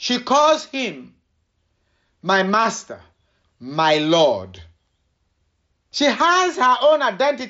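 Nothing in this speech stands out as a technical fault.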